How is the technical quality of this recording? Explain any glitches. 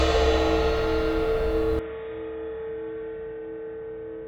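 The recording has one clear fault, from 1.79 s to the end. At that moment the input most likely switched to a poorer device, a different microphone or a headset's call profile, and everything after it comes through that narrower path. Nothing above 3.8 kHz survives, so the sound turns dull and boxy. The level falls by roughly 10 dB, and a faint new background noise sits well beneath it. The change is instant, with no silence at the switch.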